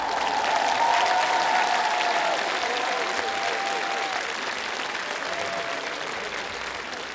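No technical faults can be heard in this recording of sounds. Nothing in the audio calls for a time stamp or an account of something going wrong.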